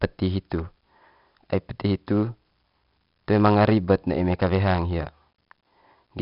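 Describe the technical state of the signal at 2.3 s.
At 2.3 s the speech carries 4-bit ADPCM compression, present for the whole clip. Each sample is coded as a coarse 4-bit step from a predicted value, so the error is a gritty hiss that rises and falls with the speech and roughens sharp onsets. The damage is heavy, with nothing above 5.3 kHz, which fits a rate around 44 kbps. Unlike perceptual codec swirl, this grit is broadband and tracks loudness.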